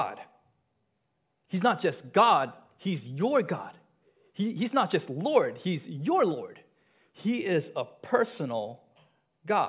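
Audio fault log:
Nothing to log here, as this bit of speech doesn't turn up any technical faults at all.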